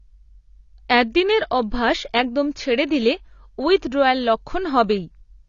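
AAC compression throughout: the speech stops dead above 6.9 kHz and sounds dull and warbling, likely from AAC-LC coarsely quantising its spectrum at a bitrate around 24 kbps.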